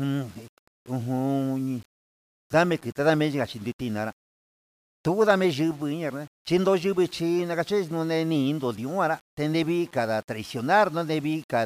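From start to finish the speech carries a gritty, grainy distortion about 30 dB below it, likely from low bit depth without dither, consistent with rounding to 8 bits. Unlike steady dither hiss, this grit tracks the signal, roughening quiet passages and sputtering in the softest tails.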